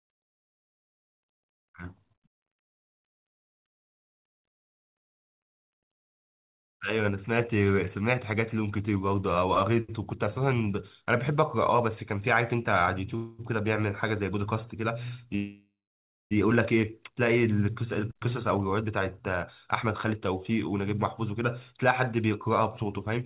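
From 4.52 to 5.44 s, packets arrive late and the jitter buffer runs dry three times, giving repeated stalls (stutter): the speech drags as about 158 ms of continued sound is filled in, the longest hold 90 ms. At 13.16 to 13.42 s a call audio freeze, likely from packets held up in transit, stretches the last sound for a brief 228 ms before speech resumes where it stopped. A second freeze runs from 15.35 to 16.34 s: the continued sound fades, then 600 ms of silence follows, inserting nearly a second of gap. From 17.88 s to 23.18 s, a jitter buffer speed-up trims short pitch-period pieces, about a fifth of a second in total, so the speech runs at 104% with unchanged pitch, all within the 4 kHz band of the call codec.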